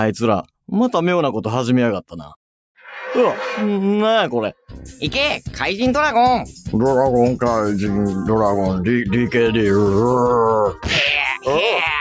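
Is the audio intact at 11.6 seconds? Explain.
Yes, the audio is intact at 11.6 seconds, with no dropout, glitch or distortion at that point.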